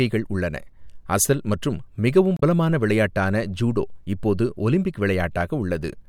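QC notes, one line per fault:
2.34–2.42 s, damaged data in a compressed stream: a brief glitch of about 80 ms breaks into the speech. Corrupted bytes in the encoded stream make the decoder misread those frames, lose sync and search for the next valid frame header before clean playback resumes.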